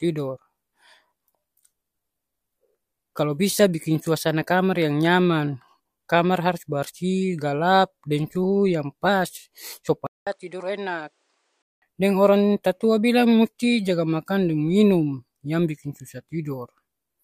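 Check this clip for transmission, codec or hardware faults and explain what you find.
One fault is audible in this speech clip, an input switched to a poorer device. From 10.07 s to 11.82 s, after a gap of about 200 ms, the sound becomes duller and about 10 dB quieter, with nothing above 10.2 kHz and a different background hiss sitting about 45 dB below the speech. The likely cause is the recording path changing to a lower-quality microphone, whose narrower bandwidth, own gain and own noise floor replace the original input's character.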